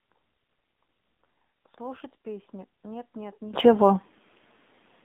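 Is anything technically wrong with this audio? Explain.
Yes, there are three faults.

Throughout, the speech carries AMR narrowband mobile codec damage: a 200 Hz to 3.6 kHz band, buzzy synthetic texture, and a pulse-driven vocal-tract model whose coarseness points to a low bitrate near 7.4 kbps. Plain band-limiting would sound dull but not buzzy.

Sample clock jitter adds a faint roughness, well below the signal at about 45 dB down, from timing errors on the order of a microsecond or two. Unlike steady hiss, it follows loud, bright passages and disappears in pauses.

From 0.00 to 3.54 s the level drops by about 22 dB and the speech turns faint. The likely cause is one channel inverted, so the centred content cancels in the mono sum.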